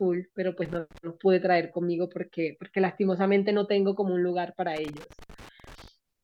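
Loose connector crackle appears twice in this speech clip, from 0.65 to 0.98 s and again from 4.76 to 5.88 s. A worn or dirty contact is making and breaking as it shifts, chopping the signal into an irregular burst of scratchy crackle.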